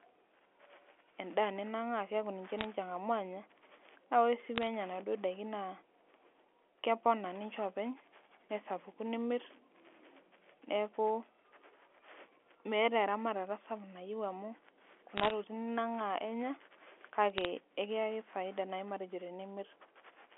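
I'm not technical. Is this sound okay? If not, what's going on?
No. There are bit errors on a digital phone line, heard as short bursts of crackle at 2.58 to 2.64 s (just after "edaa ninang'aa keeku ninche"), 4.56 to 4.67 s (after "naa ore sii"), 15.16 to 15.31 s, and 17.30 to 17.45 s (just before "ekiyaki faida naai matejo"). In those moments a few bits in every thousand were flipped on the way. Each one corrupts a single tiny slice of sound, and a flip in one of the most important bits makes a sharp tick, while the speech itself carries on unchanged.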